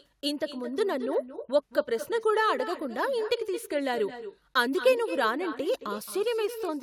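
Echo with no canceller runs through the whole clip: the far end's loudspeaker feeds its microphone and nothing subtracts it, so the speech returns around a fifth of a second later, about 11 dB quieter, as a thin shadow trailing every phrase.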